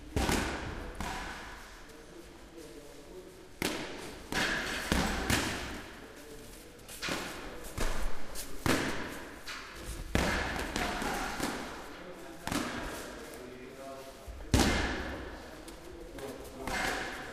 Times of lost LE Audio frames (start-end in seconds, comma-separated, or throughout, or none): none